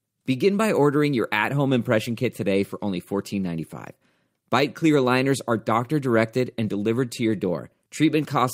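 No technical faults can be heard in this speech recording, and the signal stays continuous and intact throughout.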